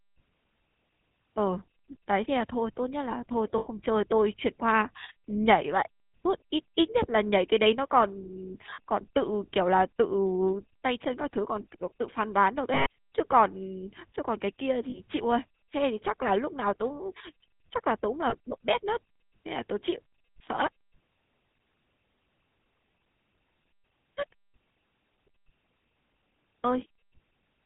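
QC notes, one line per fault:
Throughout: GSM full-rate codec. The whole clip has that buzzy, gravelly roughness, and it's plainly audible. The codec rebuilds the voice from a vocal-tract model driven by a sparse, regularly spaced pulse train, so the fine texture is lost and replaced with a coarse rasp. Nothing gets through above 4 kHz, which makes it sound dull and boxy. This fits 13 kbps GSM full rate.
3.58, 8.70, 12.74, 14.90 and 18.30 s: lost GSM frames. At each of these points the sound hangs on a rough, metallic ring. The decoder is repeating the last good frame's settings. The drops last about 80, 100, 120, 40 and 20 ms. The one at 8.70 s is scattered over about 160 ms, with the longest gap around 40 ms, so it stutters instead of holding one smear.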